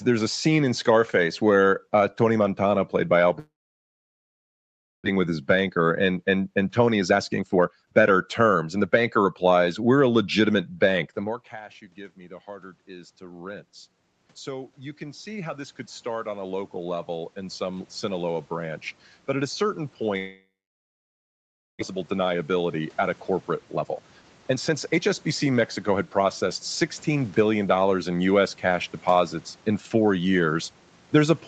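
Speech heard through a call path, band-limited to nothing above 8 kHz, which fits Opus at a low bitrate, with room noise in the background. The first long network dropout runs from 3.39 to 5.08 s and the second from 20.17 to 21.83 s. In each, the last sound is stretched into a short fading buzz before the line falls to near silence, about 1.55 s the first time and 1.31 s the second. The sound then resumes with about 1 s of material missing. The likely cause is packets that stopped arriving and were later discarded, which also left roughly 0.7 s of extra delay queued at the receiver. A jitter buffer speed-up follows each gap as the receiver works that delay off by cutting out short pitch-period slices. From 6.48 to 9.35 s the speech plays at about 122% of normal rate, and from 21.92 to 27.17 s at about 112%. In both stretches it sounds hurried while the pitch stays the same, and around 0.7 s is trimmed each time. 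Around 11 s the talker moves away and the input drops by about 21 dB. Automatic gain rising then sets in from 11.16 to 28.19 s, with the gain control climbing by about 20 dB, so speech and room noise swell back up together over several seconds.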